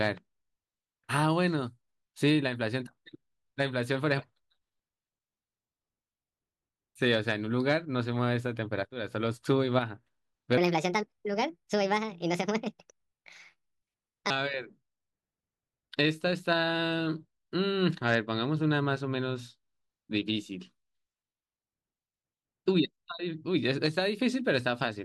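From 10.58 to 14.30 s there's a section at the wrong speed: the speech suddenly runs about 1.42 times too fast, so it's both hurried and noticeably higher, roughly seven semitones up, giving that squeaky, sped-up tape feel. Pitch and pace shift together right at the start and snap back together at the end. That pairing most likely means the stretch was played against the wrong clock rate.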